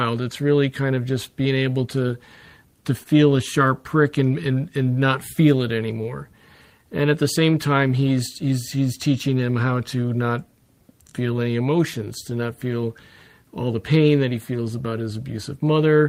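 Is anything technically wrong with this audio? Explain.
Yes, there are three related timing faults.

Throughout, there is clock drift between sender and receiver: the sender's clock runs roughly one and a half percent slow, so the receiver's buffer keeps draining. Unlike a single dropout, the irregularity never stops.

From 0.42 s to 15.98 s, repeated timing corrections stretch the audio to about 99% speed by repeating short pieces, adding around a fifth of a second in total. This sounds like faint, unevenly spaced hiccups rather than a steady pitch change.

From 3.03 s to 3.08 s there is a short stall from a late packet: the buffer ran empty and the last sound was held for 26 ms, with nothing lost. It is heard as a brief held sound with a slight buzz or dip, not a gap.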